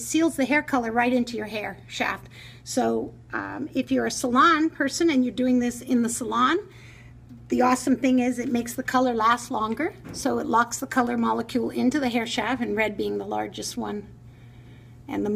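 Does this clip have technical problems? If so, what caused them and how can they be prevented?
No, there are no technical problems to report in this clip. With nothing going wrong, there is no cause to trace and nothing that needs preventing.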